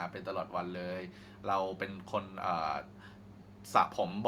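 No technical faults can be heard anywhere here.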